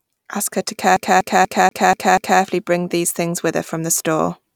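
A CD stuck on one turn throws the laser back a track, so from 0.96 to 2.42 s, after "her to", one 242 ms slice stutters six times before "bring these things with".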